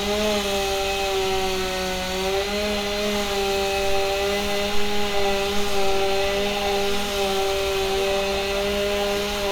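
Everyday sounds make up this clip, and no technical fault can be heard in it. Nothing goes wrong at any point, so there are no times or causes to report.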